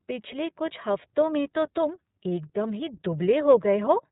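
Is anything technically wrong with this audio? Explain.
Yes. The whole clip has been through the iLBC codec. This narrowband VoIP codec encodes each 30 ms frame's excitation independently of the previous frame, and the coarseness points to its 13.33 kbps mode. Nothing reaches above 3.8 kHz, so the speech sounds boxed-in and telephone-like, lacking crisp sibilants and air. The coding damage is plainly audible: a rough, slightly synthetic, buzzy texture sits on the speech from start to finish.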